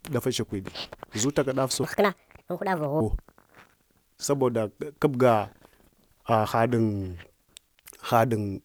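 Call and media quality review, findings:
Section at the wrong speed, 1.83 to 3.00 s: speech turns suddenly high and hurried, about seven semitones up, then snaps back to normal. Running at 1.45x, with pitch and tempo rising together. Likely a clock or sample-rate mismatch in editing or playback.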